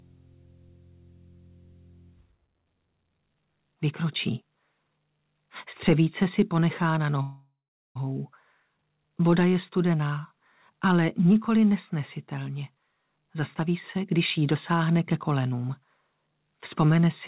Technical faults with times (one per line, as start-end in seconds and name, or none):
7.22-7.97 call audio freeze
13.27-14.56 jitter buffer speed-up